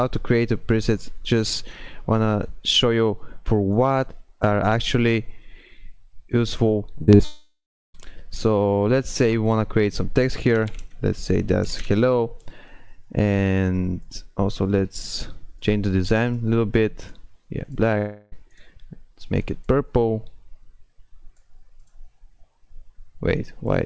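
From 6.98 to 7.21 s the sound turns choppy, with four short holes, the longest about 39 ms, patched over for roughly half that stretch. This is repeated packet loss (robotic sound): audio kept arriving late or not at all, and each hole was filled by stretching the last sound before the next gap arrived.

Straight after, from 7.25 to 7.96 s, the sound smears into a fading buzz and then falls to about 0.34 s of silence before returning with that stretch gone. This is likely a long network dropout, with the receiver extending the last sound until it had nothing left to extend.

A shorter one follows from 17.98 to 18.36 s: about 0.34 s of sound is replaced by a continued buzz, with no silence this time, and the audio resumes slightly late. The treble is capped at 8 kHz throughout, which fits a wideband call codec.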